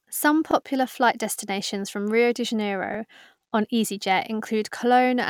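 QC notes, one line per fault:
0.51–0.53 s and 2.94–2.97 s, repeated buffer: new audio arrived late, so the device replayed its last 21 ms block, which fits a 1024-sample buffer. That speech fragment sounds twice with a hard join, heard as a brief stutter just before "flight destinations from" and again later, with essentially nothing lost.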